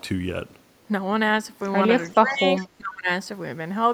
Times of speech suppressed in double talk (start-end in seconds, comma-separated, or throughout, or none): 2.25-3.09